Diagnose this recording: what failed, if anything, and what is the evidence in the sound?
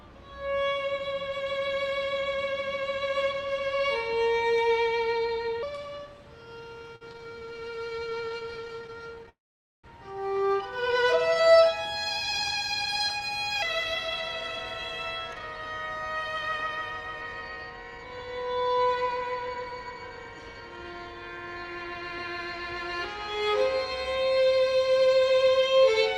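A section at the wrong speed runs from 5.63 to 13.62 s. It plays 1.25 times too fast, with pitch raised about four semitones. Speed and pitch shift together. This is likely a playback or storage stage running the audio against the wrong sample clock.

Repeated stalls (stutter) appear from 6.79 to 9.29 s. Dozens of short gaps break the flow, the longest 52 ms, filling about 28% of that span. A second patch runs 11.28 to 11.51 s, with gaps up to 12 ms. The network delivered packets late, so the jitter buffer kept running dry.

A call audio freeze follows at 9.29 s and lasts until 9.86 s. The receiver held the last sound briefly, then went quiet for about half a second. The audio then resumes where it stopped. Nothing is lost. This is likely a network hold-up that emptied the jitter buffer.

A jitter buffer slow-down runs from 11.22 to 11.98 s. Playback drops to 96% speed at unchanged pitch, stretching the sound by 38 ms. 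The receiver repeated single pitch periods to rebuild its reserve. The result is slightly drawn-out sounds.

A jitter buffer speed-up covers 14.76 to 23.36 s. The audio runs at 107% speed with pitch held steady. It sheds about half a second overall. The receiver trimmed short pitch-period pieces repeatedly to cut excess buffered delay. The result sounds hurried.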